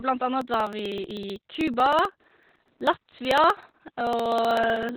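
From the very start the speech carries Opus voice compression at a very low rate, heavy enough to suggest around 8 kbps in SILK's narrowband mode. The linear-prediction coder keeps only the band up to 4.3 kHz and models the excitation coarsely, so the voice sounds muffled, hoarse and faintly robotic. On a spectrogram everything above 4.3 kHz is empty, with a hard flat ceiling, and the harmonics below it look smeared and blotchy rather than cleanly striated.

From 0.41 s to 4.89 s, periodic USB or driver dropouts cut into the signal every 0.063 s, about seventy times in all. Each time a background task stalls the bus or driver, roughly a millisecond of audio is skipped outright, and the waveform jumps discontinuously from one point to another. This is heard as a steady ticking that rides on the sound, about sixteen ticks per second. A spectrogram shows evenly spaced thin vertical broadband lines, and zooming into the waveform reveals small abrupt steps at each splice.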